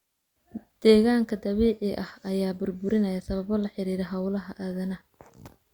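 No technical faults are audible.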